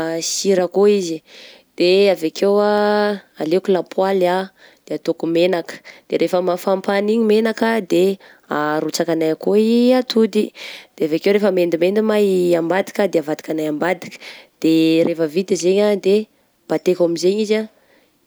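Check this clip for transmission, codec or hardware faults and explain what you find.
Two brief snaps stand out at 2.78 s and 15.60 s, electrical switching spikes riding over the speech without interrupting it, the second somewhat louder. A nearby switch or discharge likely arced into the line, unlike dropout clicks, where the signal itself breaks.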